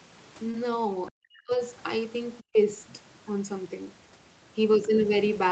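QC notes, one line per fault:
0.51–0.55 s, short concealed packet loss: About 20 ms of audio failed to arrive in time. The decoder patched roughly 17 ms of the hole by extending the sound just before it, then faded back into the real signal. The seam is brief. It comes across as a small smear or wobble rather than a clean gap. Any short sound landing in that window may be blurred or missing.
1.17–1.53 s and 2.52–2.58 s, speech suppressed in double talk: The talker's level sinks sharply in both spots. The first dip lasts about 0.4 s and falls by about 40 dB at its deepest, nearly to silence. The second is well under a tenth of a second and about 20 dB down. The likely cause is the echo canceller hearing both sides at once and ducking everything, since it could not separate the near talker from loudspeaker echo.
2.39–2.44 s, other side's voice leaking through: A faint second voice slips in for about 50 ms, roughly 30 dB below the main speech. 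It is a brief scrap rather than a sustained voice. This is likely the far end's audio coming out of the talker's loudspeaker and reaching the microphone, with the echo canceller leaving a residue. It sits just before the second suppression dip, and the whole exchange stays within the call path's 8 kHz bandwidth.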